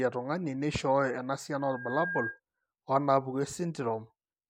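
From 1.6 s to 2.4 s a loudspeaker feedback squeal rises over the speech. The microphone is picking up its own loudspeaker, and at 1.6 kHz the loop gain goes above one, so that frequency feeds on itself. It swells over roughly 0.4 s into a steady whistle about as loud as the speech. On a spectrogram it appears as a single bright horizontal line at 1.6 kHz, and the waveform envelope balloons as the tone builds, then holds until the tone stops.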